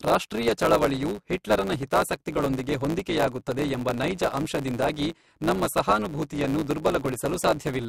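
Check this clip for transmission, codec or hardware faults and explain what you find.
One fault runs through the whole speech clip: a block size mismatch with truncation, present from start to end. One stage hands on audio in blocks longer than the next stage takes in, so the tail of every block is discarded. Each cut leaves a small discontinuity, and these repeat as a buzz at about 109 Hz. Because part of every block is lost, the speech plays about 1.09 times faster than normal, yet its timbre stays.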